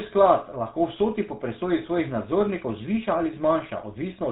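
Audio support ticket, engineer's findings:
Buzzy, gravelly roughness across the whole speech clip, nothing above 4 kHz. Consistent with GSM full-rate codec in the path, likely around 13 kbps: vocal-tract model driven by regular pulse excitation keeping every third sample, band-limited to telephone width. Damage plainly audible.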